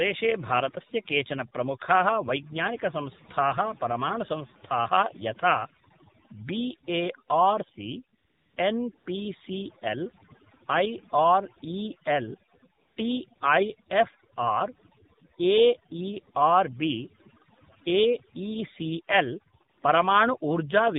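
Speech clip that's been through the AMR narrowband mobile codec for the whole 21 seconds: nothing above 4 kHz survives, and the buzzy, synthetic texture fits a low mode around 7.4 kbps. Overdone noise removal also runs throughout, leaving near-silent gaps with twinkling specks. AMR comfort noise, steady smooth hiss replacing the real background, switches in at 8.18–8.24, 8.26–8.56, 8.98–9.06, 12.80–12.96, 13.36–13.40, 19.70–19.78 and 19.80–19.82 s.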